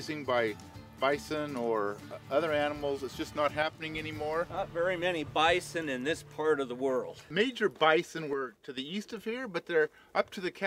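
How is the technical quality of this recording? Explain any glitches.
The recording has two brief, abrupt level drops, each about 6 dB, from 3.63 to 3.82 s and from 8.33 to 8.78 s. Both are likely a case of one channel dropping out: with identical sound on both sides, losing one leaves the mono sum at half amplitude. The audio dips suddenly and then snaps back without any change in tone. On a waveform the envelope halves with square edges, and a spectrogram shows a uniform darkening across all frequencies for each interval.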